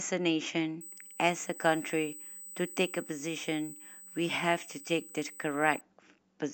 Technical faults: USB whine

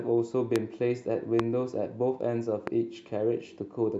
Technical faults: loud pop

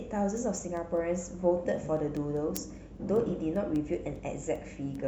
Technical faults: word clock ticks

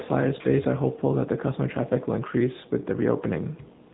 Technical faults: AMR narrowband mobile codec

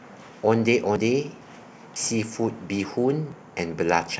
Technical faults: dropped buffer (overrun)

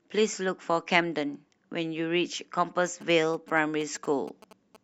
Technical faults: GSM signalling bursts

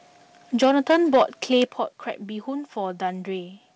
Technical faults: microphone overload; microphone volume stepped down

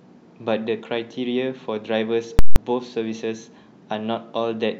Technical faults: invalid numbers at full scale

